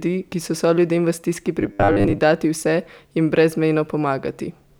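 Robotic sound from repeated short buffers runs from 1.61 to 2.18 s, starting right after "so soljudem v stiski". The speech collapses into a rigid metallic buzz at 100 Hz that still loosely tracks the syllables. The likely cause is audio arriving too seldom, so playback keeps looping a 10 ms slice to fill the gap while the real signal is skipped. Roughly 70% of this stretch is such repeats, and that loop length imposes the fixed 100 Hz pitch.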